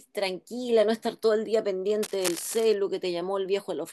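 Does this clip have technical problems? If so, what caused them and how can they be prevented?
Yes. From 2.02 to 2.76 s there is cable scratch noise, a rough rustling burst sitting roughly 10 dB below the speech. It is likely caused by a worn cable or connector being moved, so its contact resistance jumps around and injects irregular noise. On a spectrogram it shows as ragged broadband smears stacked over the speech harmonics, and the waveform carries uneven spiky fuzz for that stretch. Replacing worn leads and securing connectors so they cannot shift during recording prevents it.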